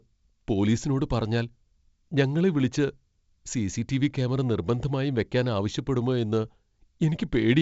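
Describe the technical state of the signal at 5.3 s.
At 5.3 s the speech is intact, carried through G.722 wideband telephone coding at 64 kbit/s with no fault at that moment.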